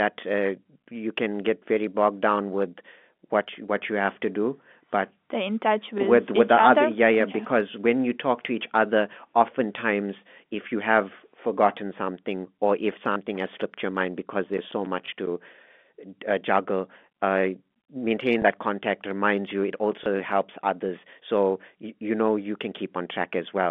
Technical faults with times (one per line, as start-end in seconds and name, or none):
5.98 packet loss with last packet repeated
13.12-13.16 packet loss with last packet repeated
14.03-15.68 CD scratch ticks
15.06 packet loss with last packet repeated
18.42 packet loss with last packet repeated
20.04 packet loss with last packet repeated